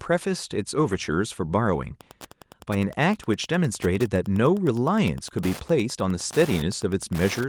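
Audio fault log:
0.79–0.97 s, lost packet rebuilt from error correction: five separate packets went missing, about 100 ms of audio, which fits five 20 ms packets, and the decoder played the low-bitrate backup copies carried in later packets. There is no gap, but that stretch sounds rougher and noisier.
1.98–7.48 s, Wi-Fi interference: a nearby Wi-Fi radio's beacon, sent every 102.4 ms, is being rectified by the audio circuitry. It adds a steady ticking roughly ten times a second, sitting around 20 dB below the speech.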